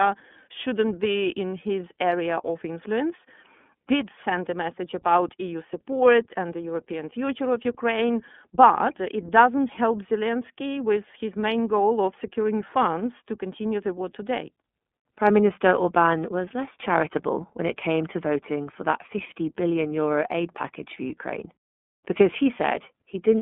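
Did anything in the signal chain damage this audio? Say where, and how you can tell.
Yes. The damage happens at the codec stage and runs through the whole clip. This is the iLBC codec. The speech is confined to a narrow telephone band, from about 200 Hz up to 3.5 kHz, with nothing above. The speech sounds clear but rough and slightly synthetic, and the codec damage is plainly audible throughout. iLBC codes each frame's excitation independently of the previous one. The grain here fits 30 ms frames at 13.33 kbps.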